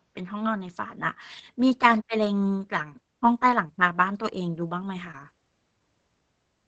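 At 4.55 to 4.57 s there's a lost packet rebuilt from error correction: the next packet carried a low-bitrate copy, so the 20 ms has no gap but sounds briefly rougher and noisier. Around 5.11 to 5.15 s comes a short concealed packet loss, where 20 ms never arrived in time and the decoder extended the preceding sound for about 18 ms before blending back, giving a quick smear or wobble. That same stretch, 5.13 to 5.15 s, also has a 20 ms error-correction rebuild overlapping the tail of the concealment, adding rougher, noisier sound as the real audio returns. All of this sits on an Opus call path at 20 kbps with audio running up to 8 kHz.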